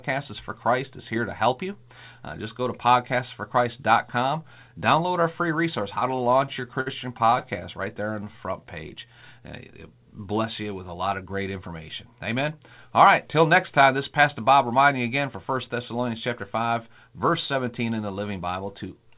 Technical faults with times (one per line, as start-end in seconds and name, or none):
6.00-7.63 repeated stalls (stutter)
7.95-8.67 jitter buffer slow-down
10.94-11.70 jitter buffer speed-up